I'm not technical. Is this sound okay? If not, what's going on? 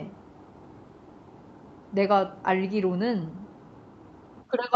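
Yes, nothing stood out as a problem when listening to this recording.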